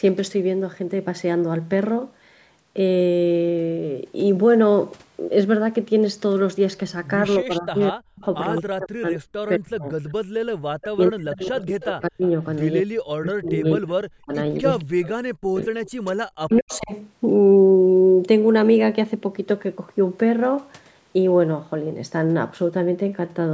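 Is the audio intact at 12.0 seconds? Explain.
No. From 10.61 to 12.23 s the speech dips and breaks up in pieces, at its deepest falling by roughly 40 dB. This is speech suppressed in double talk, likely from an echo canceller that could not separate the talker from the loudspeaker echo and turned both down.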